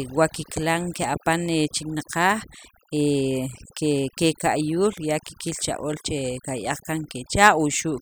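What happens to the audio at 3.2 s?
Overdone noise removal runs through the whole clip, so it's there at 3.2 s too: bands near the noise estimate get gated off, leaving twinkly near-silence, with the quietest parts of the voice removed along with it.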